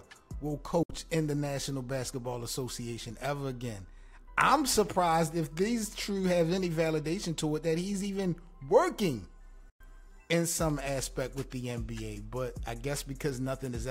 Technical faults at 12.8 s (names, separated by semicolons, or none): none